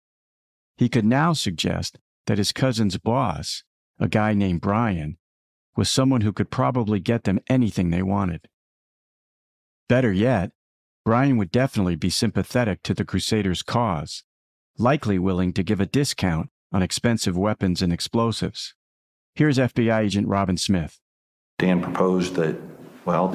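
No technical faults can be heard anywhere in the speech. There is nothing to mark at any point along the timeline.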